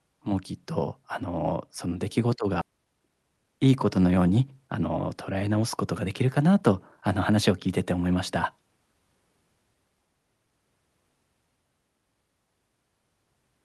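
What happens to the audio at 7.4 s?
At 7.4 s the speech is in a jitter buffer speed-up (6.06–7.51 s): excess buffered audio is drained by cutting pitch-period slices, about a tenth of a second in total, so the speech runs 6% faster at unchanged pitch and sounds hurried. On a spectrogram, harmonics stay level while syllables are squeezed closer together.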